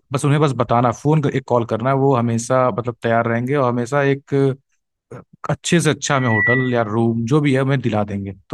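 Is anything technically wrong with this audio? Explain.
Yes. From 6.11 to 6.91 s there is loudspeaker feedback squeal. A microphone hears its own loudspeaker, and at 2 kHz the loop gain passes one. That pure tone swells over about a third of a second into a piercing squeal, roughly as loud as the speech.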